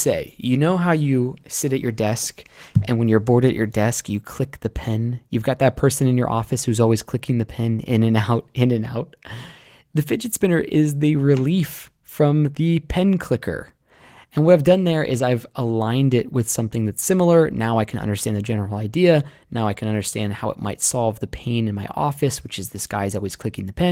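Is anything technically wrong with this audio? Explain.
No, nothing technically wrong is audible in this recording.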